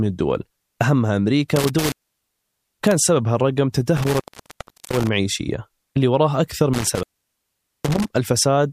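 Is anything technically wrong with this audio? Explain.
Yes. Intermittent contact affects the speech at 1.56–3.02 s, 3.97–5.09 s and 6.74–8.14 s. A loose cable or plug briefly opens the circuit, so the speech drops out for about 1.03 s, 1.0 s and 0.81 s, with crackle at the edges and faint hiss while the line is open.

Damaged data in a compressed stream appears at 1.92 s and 4.91 s. Corrupted bytes make the decoder misread frames and lose sync while it hunts for the next valid frame header, which produces a short chirp or blip at each point.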